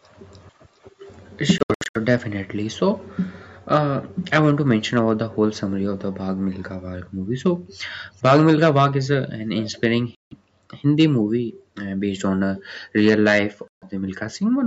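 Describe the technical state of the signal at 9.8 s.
At 9.8 s, two faults overlap. The far end's echo canceller most likely let some of its loudspeaker's output back into its microphone, producing an echo leak from 9.55 to 9.81 s. A faint copy of the speech returns about 0.41 s after the original, roughly 20 dB below it. It is heard as a brief, ghostly doubling trailing behind the speech just before 9.8 s, where it ends.

Underneath, hard clipping runs through the whole clip. Some stage in the chain was driven about 8 dB beyond what it could pass, so the loudest peaks were sliced flat. Only a small fraction of the waveform actually hits the ceiling, but each flattened peak throws off harmonics far up the spectrum. The result is crackly, gritty bursts on the louder syllables around this moment, a roughness that sits within the call path's 8 kHz upper limit.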